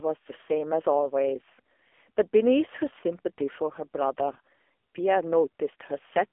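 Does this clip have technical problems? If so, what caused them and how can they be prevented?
Yes. Throughout, the speech went through the AMR narrowband mobile codec at a low rate, which fits AMR-NB's 6.7 kbps mode. A pulse-driven vocal-tract model rebuilds the voice, leaving it buzzy and synthetic, confined to 300 Hz–3.5 kHz, with nothing above 3.7 kHz. Prevent this by capturing over a wideband path or a higher-bitrate codec.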